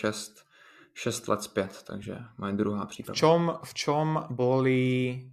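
A speech recording with one fault: compressed frames skipped, at 3.07 s. A short slice of audio, around 50 ms, never plays. The decoder either never received those frames or rejected them as damaged, so playback jumps ahead by the length of the frames left out, with the speech lurching slightly forward.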